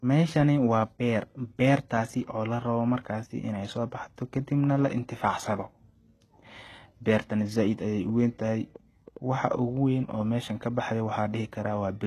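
Throughout the speech, the upper frequencies sound synthetic, with gritty, lispy s sounds and plainly audible codec damage that fits HE-AAC compression at a low bitrate, likely around 16 kbps. A spectrogram shows nothing above 12.3 kHz and a coarse, copied-looking treble band.

From 8.09 to 9.60 s, just after "bertana said ayay", a train of clicks ticks over the audio. There are roughly seven similar pulses at an uneven pace of about 4.7 per second, peaking about as loud as the speech, likely from electrical interference. They appear as thin spikes on the waveform and as narrow vertical broadband lines on a spectrogram.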